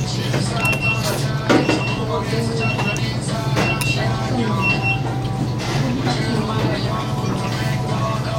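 No technical faults can be heard anywhere in the recording, and the signal holds steady and intact throughout.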